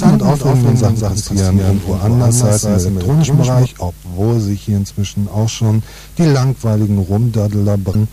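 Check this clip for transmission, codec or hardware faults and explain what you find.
Two faults are present.

From the very start until 3.66 s there is a doubled audio track. A second full-band copy of the sound runs about a fifth of a second behind the first, a few dB quieter. The likely cause is the signal being captured twice, once through a slower path. The late copy has no decay or room colour. It is already running when the clip opens, and it stops abruptly at 3.66 s.

From 7.92 to 7.95 s there is damaged data in a compressed stream. Part of the encoded data there is corrupt. The decoder cannot read those frames, loses sync and searches for the next valid frame header. The result is a brief chirp or blip lasting about 30 ms.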